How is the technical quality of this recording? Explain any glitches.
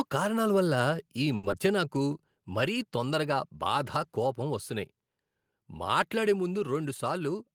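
The speech has several network and level faults, most clustered around one to two seconds, with another near the end.

At 1.02 s, just after "కారణాల వల్ల", the whole signal drops about 2 dB in a single step, voice and background together. The likely cause is the call software lowering the microphone's input volume in one move. On a waveform the envelope steps down cleanly at that point and stays lower. On a spectrogram every band dims at once, with no change in spectral shape.

From 1.35 to 1.45 s, after "కారణాల వల్ల ఈ", there is a short stall from a late packet. A packet arrived late, so the receiver held the last sound for about 80 ms until it came in, then resumed from the same place. Nothing is lost, but that sound lingers unnaturally. A spectrogram shows frozen, flat horizontal bands. The waveform repeats near-identical cycles, and the delay grows by 80 ms.

From 1.51 to 1.54 s, still after "కారణాల వల్ల ఈ", a short concealed packet loss drops about 40 ms of real audio. 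Only about 10 ms of synthetic continuation covers the hole before the signal blends back, so a brief smear or wobble replaces what was there. On the spectrogram a thin vertical slice looks blurred or smooth. The waveform shows a small seam where the real signal resumes.

From 1.67 to 2.03 s comes a jitter buffer slow-down, with playback at about 92% speed. The receiver stretched the audio by repeating single pitch periods and bits of pause, adding 37 ms to rebuild its reserve. The pitch stays the same, but sounds drag. A spectrogram shows harmonics held steady while syllables are widened in time. The waveform shows runs of duplicated cycles.

From 6.85 to 7.53 s the opposite happens: a jitter buffer speed-up at about 108%. The buffer held more than its target, so the receiver cut short slices of one or a few pitch periods, removing around 70 ms in total. The pitch is unchanged, but the speech sounds hurried. 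On a spectrogram syllables appear compressed in time with harmonics intact. The waveform has tiny joins where cycles were removed.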